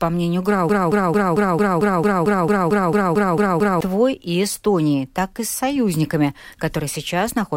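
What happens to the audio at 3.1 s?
At 3.1 s the speech is caught in a broken-record loop running from 0.69 s to 3.81 s: a 0.22 s fragment plays back to back, 14 times, and whatever should have followed is gone. The likely cause is a stalled player or stream that kept resending the last chunk it held. What separates this from echo or stutter is that each pass is identical and at full level, with no decay and no forward progress.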